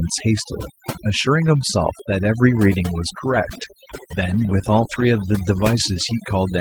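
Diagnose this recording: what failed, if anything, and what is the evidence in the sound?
Overdone noise removal in the call processing runs through the whole recording. The background drops and breaks up into twinkling specks. The suppressor, set too hard, pulls individual frequency bands down whenever they approach its noise estimate, taking quiet speech detail with them.

A call bitrate drop at the network and codec stage runs from 3.18 to 6.25 s. The speech turns rougher, more watery and duller, which fits a fall from about 32 to 17 kbps, with the worst stretch lasting about 2 s. A lower bandwidth estimate forced Opus into coarser coding and a narrower top end until the bitrate recovered.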